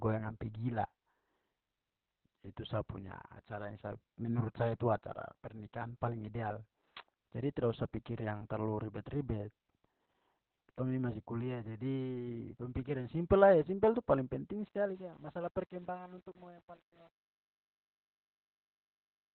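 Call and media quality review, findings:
Opus voice compression, whole clip: muffled, hoarse, slightly robotic speech. Spectrogram shows nothing above 4.2 kHz. Narrowband SILK coding, consistent with roughly 8 kbps at 20 ms frames, with coarse excitation.

Truncation distortion on the fade, 14.68–19.35 s: the tail of the fade-out turns gritty from 15.04 s onward. The waveform breaks into square steps, consistent with an undithered gain stage holding about 9 bits.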